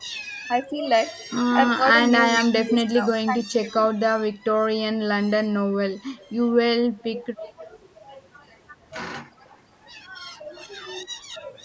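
Between 1.77 and 3.99 s the voice dips in pieces, about a second in all and up to about 25 dB down. This is speech suppressed in double talk, likely from the echo canceller ducking both sides while the far end spoke. The dips follow the other talker rather than occurring at random, as packet loss would. Echo leak follows at 6.17–6.31 s as a faint copy about 30 dB below the speech, then at 6.93–7.67 s about 15 dB below. It is likely an imperfectly cancelled loudspeaker return. A fixed 305 ms delay sets it apart from room reverberation. Within that stretch, at 7.34–7.6 s, the voice dips again by about 15 dB. Another faint echo scrap comes at 9.48–9.59 s, and a final suppression of about 20 dB falls at 11.09–11.35 s.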